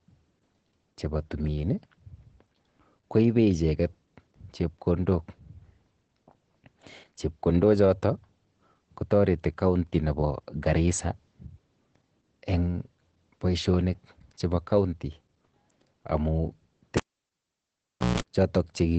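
Opus voice compression runs throughout. Nothing reaches above 8.7 kHz, and coarse SILK coding leaves the speech muffled, hoarse and faintly robotic, which fits about 12 kbps. At 16.97 s a cable is pulled and plugged in. A pop gives way to near silence for about 1.2 s. A 165 ms burst of 60 Hz mains buzz follows, and another pop at 18.20 s brings the sound back.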